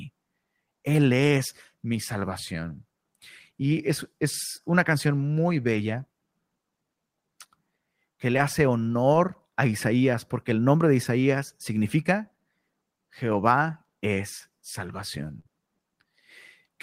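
Speech with four short stretches of lost packets rebuilt from error correction: at 5.73 s just after "es una canción muy", 8.33 to 8.39 s (40 ms, consistent with two consecutive packets), 9.13 to 9.15 s, and 11.03 s after "porque el nombre de". Each sounds briefly rougher and noisier but continuous, with nothing skipped, because the decoder played a low-bitrate copy carried in the following packet. A burst of packet loss at 15.39 to 15.47 s differs: about 54 ms of the last sound is stretched and faded into a held buzz or hiss, then the speech resumes with roughly 60 ms missing, so material is actually dropped rather than merely degraded.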